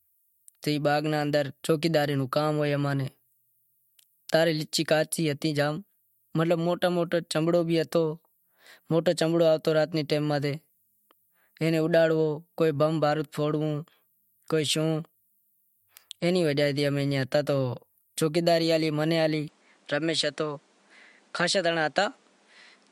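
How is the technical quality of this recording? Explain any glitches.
There's one glitch near the end. From 19.48 s to the end, the sound goes duller and picks up a new background noise, roughly 35 dB below the speech. The input likely switched to a poorer device, which passes nothing above about 10.1 kHz. There's no gap at the switch, and the loudness stays about the same.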